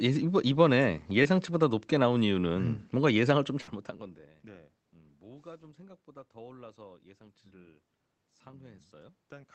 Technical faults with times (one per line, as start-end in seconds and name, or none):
1.23-1.27 short concealed packet loss
3.61-3.69 burst of packet loss
8.51-8.55 short concealed packet loss